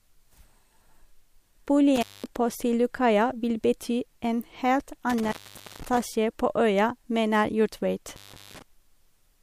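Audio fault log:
1.96–2.26 s, 5.10–6.01 s, 8.08–8.62 s: intermittent contact. The speech drops out three times, with crackle at each edge. The line stays open for about 209 ms, 480 ms and 385 ms. Faint hiss is left during each gap. The second gap ends just before "på øya". A loose cable or plug briefly loses its connection. The crackle is the contact scraping as it breaks and remakes.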